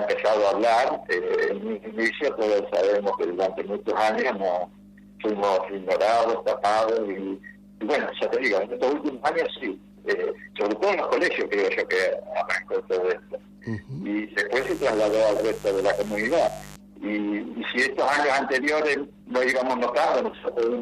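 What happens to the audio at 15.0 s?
At 15.0 s the sound is overlaid by mains buzz, running from 14.58 s to 16.76 s at roughly 20 dB below the signal. Sharp switching spikes at 100 Hz, twice per 50 Hz cycle, leak in from a dimmer, rectifier or unshielded line and produce a dense stack of harmonics. Plain mains hum is a smooth, low tone at the fundamental. This buzz is raspy and edged, and its energy reaches up into the kilohertz range.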